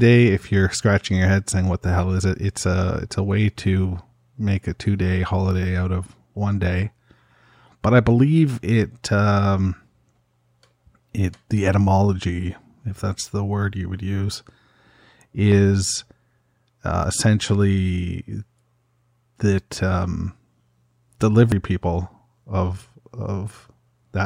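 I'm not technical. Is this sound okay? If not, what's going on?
No. At 7.72, 15.52, 17.04 and 21.52 s the speech jumps forward, losing a brief slice each time, likely a dropped buffer (overrun).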